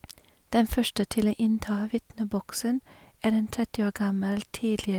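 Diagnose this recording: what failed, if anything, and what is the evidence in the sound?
Nothing in this speech recording points to a failure at any stage, so there's no fault to diagnose here.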